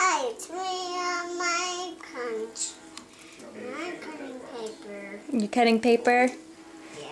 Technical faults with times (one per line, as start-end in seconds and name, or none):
0.00-7.12 resampler restarted on every block